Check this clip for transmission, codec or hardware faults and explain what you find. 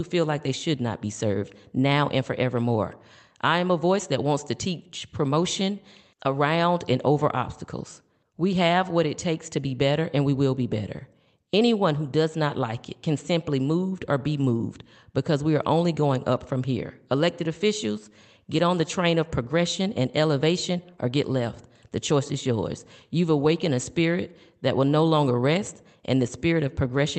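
The speech comes through the call path intact and continuous, with its audio band ending at 8 kHz, which fits an Opus link running at about 32 kbps.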